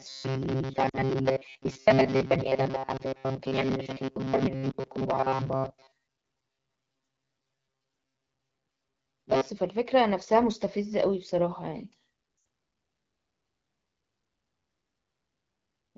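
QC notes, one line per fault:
0.01–9.49 s, robotic sound from repeated short buffers: a rigid metallic buzz near 133 Hz over most of the speech, likely from starved playback repeating a roughly 7.5 ms buffer; the fixed pitch distinguishes it from frame loss.
0.89–0.99 s, 2.97–3.02 s, 4.71–4.75 s, 12.37–12.45 s, lost AMR speech frames: brief dips or warbles for the single lost frames and a drop to near silence in the longer runs, lasting 40, 20, 20 and 80 ms. The decoder stretches the last good frame and fades it, unlike the steady buzz.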